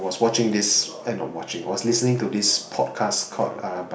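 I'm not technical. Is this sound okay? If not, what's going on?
Yes, nothing in this recording stood out as a problem when I listened to it.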